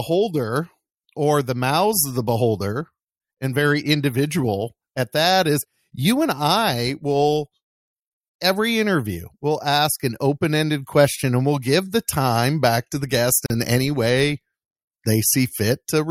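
At 13.46 s the speech drops out for about 39 ms, until 13.50 s, a gap at a join of encoded pieces. Separately encoded segments were butted together untrimmed, so encoder start-up delay and final-frame padding left silence with smeared edges before the speech resumes.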